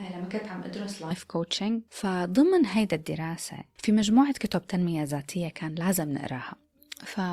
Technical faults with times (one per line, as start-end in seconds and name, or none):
0.00-1.11 switch to a distant microphone